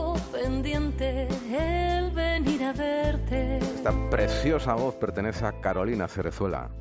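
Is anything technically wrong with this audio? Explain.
No, the signal shows no technical faults and reaches the listener intact throughout.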